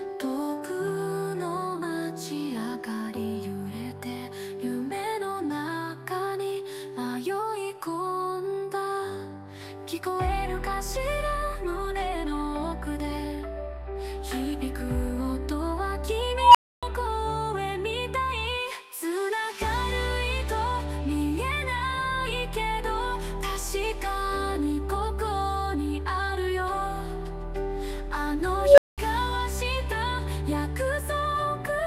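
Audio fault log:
16.33–16.83 s and 28.55–28.98 s: unstable filter. A tone around 1 kHz, then around 500 Hz, swells for about 0.2 s and clips. It then cuts to silence for 0.28 s and 0.2 s as the runaway recursive filter overflows and resets.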